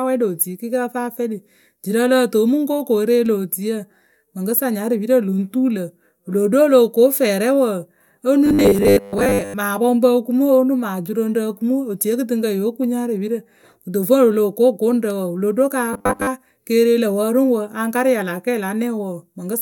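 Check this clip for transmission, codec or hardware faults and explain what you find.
Two faults of one kind are present in this speech. Robotic sound from repeated short buffers appears from 8.46 to 9.55 s and again from 15.93 to 16.27 s. The cause is likely new audio arriving too seldom, so a very short stretch is replayed over and over while most of the real signal is skipped. The repeats recur every 10 ms, which fits a 10 ms buffer and imposes a fixed 100 Hz buzz. The speech becomes a rigid, metallic drone that only loosely tracks what is being said.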